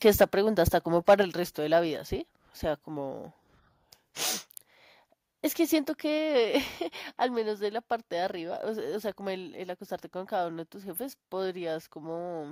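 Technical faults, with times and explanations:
0.06 to 0.24 s, 0.67 to 0.69 s and 1.08 to 1.14 s, microphone overload: harsh crackle on loud peaks, likely from input gain driving them about 4 to 6 dB past the converter's limit, flattening their tops.
0.23 s, 1.23 s and 7.2 s, microphone volume stepped down: the sound and background abruptly drop about 2, 4 and 2 dB, likely software cutting the microphone's input level after finding it too loud.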